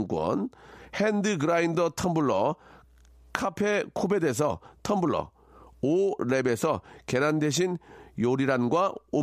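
No technical faults are audible.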